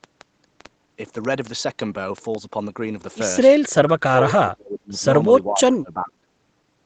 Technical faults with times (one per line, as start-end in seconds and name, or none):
0.04-2.36 train of clicks
3.89-5.05 speech suppressed in double talk
5.48-6.26 speech suppressed in double talk